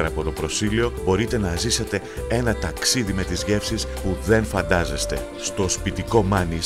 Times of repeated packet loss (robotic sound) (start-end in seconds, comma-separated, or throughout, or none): none